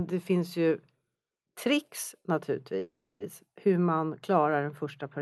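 Call audio freeze, 2.79 to 3.22 s: the speech halts, its last sound trails off as a fading buzz into 290 ms of silence, then resumes where it stopped with nothing lost, 410 ms late. Delayed packets likely emptied the jitter buffer.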